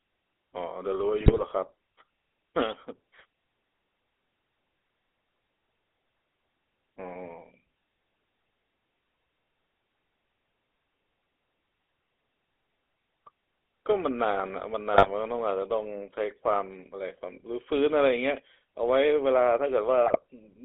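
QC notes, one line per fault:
Throughout: GSM full-rate codec. The speech is confined to a narrow telephone band of roughly 300 Hz to 3.6 kHz, with nothing above it, and carries a plainly audible buzzy, gravelly roughness. The coder replaces the real vocal excitation with a sparse, regularly spaced pulse train feeding a vocal-tract filter. This coarse approximation sounds rasping rather than smooth, and the texture fits a 13 kbps full-rate stream.
1.20–1.71 s, 14.94–15.09 s, 20.06–20.17 s: GSM bit errors. Each burst breaks the speech into squawks, pops and gargling. Corrupted bits reach the decoder and scramble its filter, pitch and gain parameters, so the spectrum bends or the level jumps for each damaged frame. The first burst is the longest, spanning several frames in a row. The later two are brief, and the damage points to an error rate of around 1.3 to 2.4 percent on a weak link.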